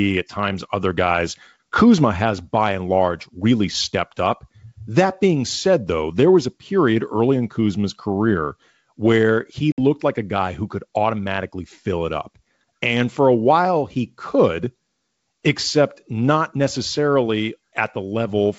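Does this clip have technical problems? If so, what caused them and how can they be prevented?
Yes, there's one: packet loss on an ADPCM call, at 9.72 to 9.79 s in the speech. About 60 ms drops out, which is roughly a few packets, and it's filled with a hard-edged hole of silence. Because the G.722 stream at 64 kbit/s is ADPCM, the decoder's predictor and step size lose track of the sender's during the gap, so the speech comes back a bit rough before settling within some tens of milliseconds. To prevent it, use a jitter buffer with packet loss concealment that also resets the ADPCM decoder state cleanly after a gap.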